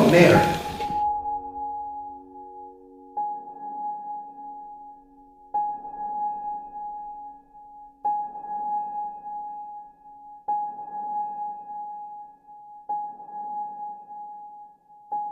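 From 7.61 s to the end, a resampler restarted on every block adds a 100 Hz buzz that is present only while there is signal. The rate fits 10 ms blocks, likely in a 48 kHz to 44.1 kHz conversion, each handled without its neighbours' samples, leaving an error at every block edge.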